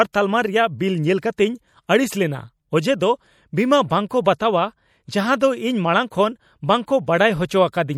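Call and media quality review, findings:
Watery, swirling speech throughout, with smeared consonant onsets and chirpy s sounds. Likely MP3 compression: starved encoder dropping weak frequency lines frame to frame and cutting high end, consistent with roughly 64 kbps. Plainly audible damage.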